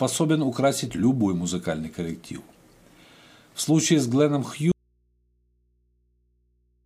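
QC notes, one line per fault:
4.72 s to end: audio dropout to a faint residue, an abrupt cut to mains hum about 45 dB down, likely an open but live input after signal loss.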